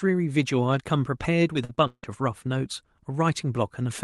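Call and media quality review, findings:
Repeated packet loss (robotic sound), 1.53–2.05 s. Probable component: network feeding the jitter buffer. Packets lost or late in bursts; concealment stretches preceding audio over four holes (longest 160 ms, nearly half the span), making the speech choppy with pieces missing.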